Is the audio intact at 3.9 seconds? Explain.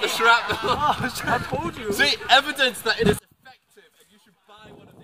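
No. From 3.19 s to the end at 5.03 s the sound drops by about 30 dB to a faint residue. The likely cause is one channel inverted: with reversed polarity, material common to both channels cancels when summed to mono, leaving only their small difference.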